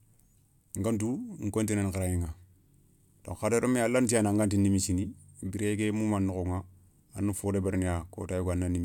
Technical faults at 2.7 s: none

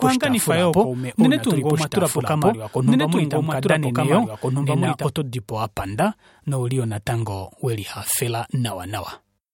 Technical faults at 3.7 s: doubled audio track

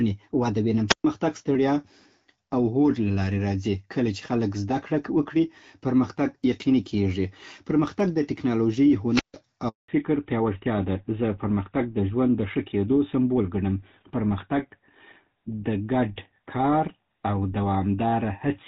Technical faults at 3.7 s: none

